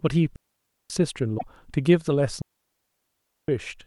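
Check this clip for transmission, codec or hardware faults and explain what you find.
Three faults are audible in this speech clip: two digital wireless dropouts and one burst of damaged data in a compressed stream.

From 0.36 to 0.90 s, and again from 2.42 to 3.48 s, the speech vanishes into near silence for about 541 ms and then about 1.07 s. These are digital wireless dropouts. The radio link lost too much data to rebuild the audio, so the receiver muted behind a very short fade. Unlike an analogue wireless fade, there is no hiss, crackle or noise burst at either edge. The sound simply stops cleanly and resumes.

From 1.35 to 1.43 s there is a brief glitch lasting roughly 80 ms. This is damaged data in a compressed stream. Corrupted bytes made the decoder misread the frames at that point, lose sync and skip forward to the next valid frame header. This short decoding glitch sets it apart from the dropouts, which leave a clean, silent gap in place of the audio.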